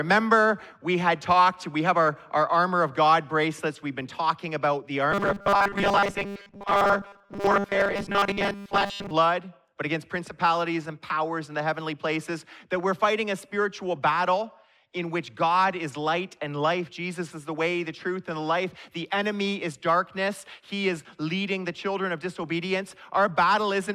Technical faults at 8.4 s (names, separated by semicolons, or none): robotic sound from repeated short buffers